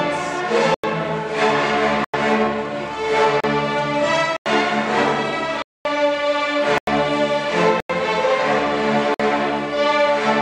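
The output buffer was not filled in time, leaving blocks of digital silence at 0.74, 2.04, 3.40, 4.37, 5.62, 6.78, 7.80 and 9.14 s. Most last 93 ms, which fits a 4096-sample buffer; others run 33, 230 and 53 ms. Each drop is a hard hole.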